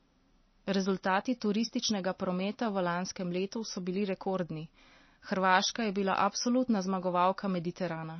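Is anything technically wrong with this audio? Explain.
Yes. Throughout the speech there is plainly audible codec damage, likely from MP3 compression. Nothing remains above 6.1 kHz, and weak frequency lines drop in and out between frames, giving a watery, swirly texture. This fits a bitrate of roughly 28 kbps.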